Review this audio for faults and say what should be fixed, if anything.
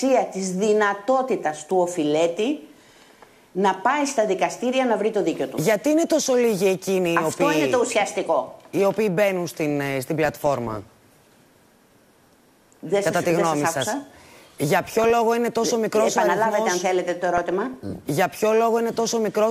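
DAB burbling occurs at 10.24–11.23 s, 14.85–15.10 s and 17.37–18.05 s. Bit errors get past the error correction, which fits a bit error rate of a few tenths of a percent corrupting the MP2 data. The result is short blips of noise in single sub-bands. Unlike steady low-bitrate swirl, it comes in bursts and never cuts to silence the way lost packets do. A better antenna position or a stronger received signal would prevent it.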